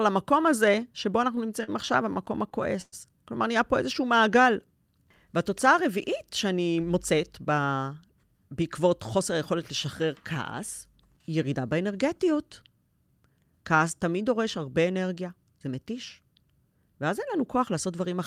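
Speech with four jitter-buffer faults in the first eight seconds. At 1.64 s there is a short stall from a late packet. A packet missed its playout deadline, the buffer ran dry, and the receiver extended the last sound for about 41 ms until the data arrived. Playback then resumed from the same point, so nothing is lost, but the sound is held slightly too long and playback runs 41 ms later from there on. From 2.14 s to 2.94 s, repeated stalls produce a stutter. Packets kept arriving late or more slowly than they were played out, so the buffer emptied six times in that span. Each time, the receiver carried the last sound forward, fading it during the longer waits, until it could continue. The fills total 167 ms, about a fifth of the span, with the longest single gap at 110 ms. Nothing is dropped, but the speech drags and catches. Between 3.99 s and 4.44 s, a jitter buffer slow-down is audible. 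To rebuild its reserve, the receiver repeated individual pitch periods and slices of pauses, adding 47 ms. Playback runs at about 91 percent speed with the pitch unchanged, so sounds are drawn out. From 6.45 s to 7.67 s, the opposite happens in a jitter buffer speed-up. The buffer was holding more audio than its target, so the receiver cut short pieces of one or a few pitch periods in quick succession, removing roughly a tenth of a second in total. The speech plays at about 108 percent speed at the same pitch and sounds hurried.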